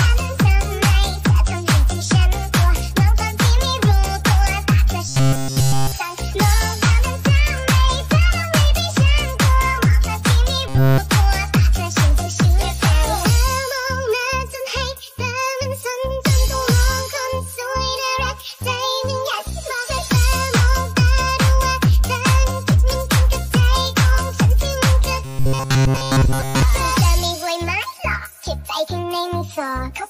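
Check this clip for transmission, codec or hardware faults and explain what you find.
Three transmission faults are audible, all of the same kind. Robotic sound from repeated short buffers occurs at 5.09–5.92 s, 10.68–10.98 s and 25.25–26.62 s. The likely cause is incoming audio arriving too slowly, so a tiny segment of roughly 7.5 ms gets replayed over and over in place of the missing material. Almost none of the real audio comes through in these stretches, and the looping imposes a rigid, metallic 134 Hz buzz.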